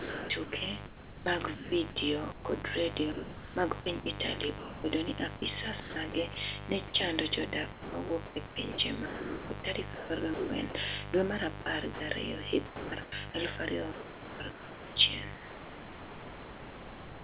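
Throughout the clip, a missing shield, dimmer or rectifier is letting mains switching spikes into the signal. The result is mains buzz at 50 Hz with its harmonics, about 10 dB below the speech. It is a steady, raspy buzz that runs up to the 4 kHz top of this narrowband call path.

From 0.0 to 4.06 s, the sender's voice detector likely flips on and off repeatedly, chopping the sound. About 1.7 s is swapped for comfort noise, so syllables break up. The same sound chopped by the voice detector returns at 5.36–6.36, 7.72–10.74, 11.62–12.0, 12.66–13.34 and 13.92 s to the end.

At 4.58–4.84 s and 6.88–6.94 s, the detector likely mistakes quiet speech for background and stops sending. This sound dropped by the voice detector is replaced entirely by comfort noise, leaving gaps of 260 ms and 60 ms.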